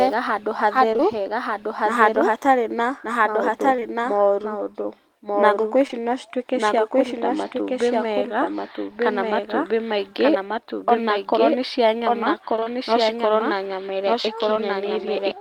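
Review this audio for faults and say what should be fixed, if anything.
Doubled audio track, throughout: a full-band second copy of the speech runs about one second behind the original at roughly the same level, with no decay or room colour. It is likely from a second capture path or an edit stacking two out-of-step copies. Prevention: route only one capture path into the mix and check edits for duplicated regions.

Short concealed packet loss, at 0.93 to 1.08 s (with a second hole at 0.96 to 1.01 s), 3.76 to 3.80 s, 3.80 to 3.83 s, 5.87 to 6.03 s (with another at 5.91 to 5.94 s), and 14.54 to 14.58 s: each time about 20 ms of audio never arrived. The decoder extended the preceding sound to bridge it, leaving brief smears or wobbles, and around 1.0 s and 5.9 s the timing stretches slightly. Prevention: use a larger jitter buffer and forward error correction on the link.

Repeated packet loss (robotic sound), 12.56 to 12.68 s: three holes follow in quick succession, the longest 22 ms, and about half of that stretch is patched-in continuation. 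This gives a choppy texture with fragments missing. Prevention: fix the network congestion or path instability behind the burst, and add redundancy so consecutive losses can be recovered.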